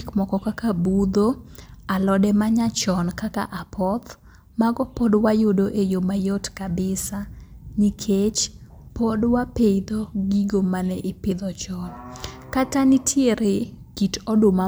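No technical faults can be heard anywhere in the recording.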